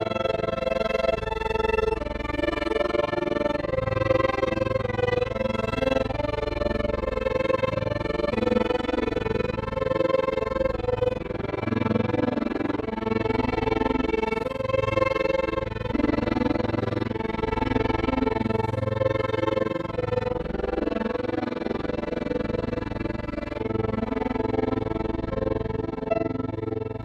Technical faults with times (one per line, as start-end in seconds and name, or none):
0.00-27.04 overlap-add ripple
8.31 damaged data in a compressed stream
15.91 damaged data in a compressed stream
23.18 damaged data in a compressed stream